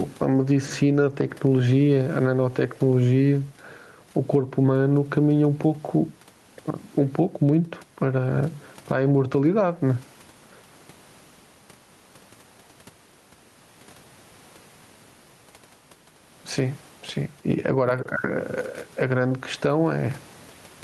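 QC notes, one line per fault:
Throughout, gain pumping: the room background sits about 40 dB below the speech, and the gain swings by around 10 dB, making the level breathe in step with the talking. Loud and quiet syllables sit closer together than they should, giving a squashed, flattened delivery. The likely cause is input gain set far too high, with a fast limiter clamping down on every loud moment.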